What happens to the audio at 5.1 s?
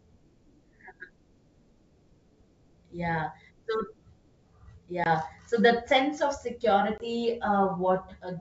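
Packet loss on an ADPCM call, just before the asked moment, from 5.04 to 5.07 s. About 20 ms of speech drops to hard-edged silence, which fits a single lost packet. Because the decoder's adaptive predictor and step size drift out of step with the sender's during the gap, the speech comes back slightly distorted before settling. That recovery is what separates it from a plain dropout.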